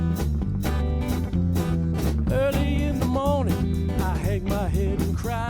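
No technical faults can be heard anywhere in the signal.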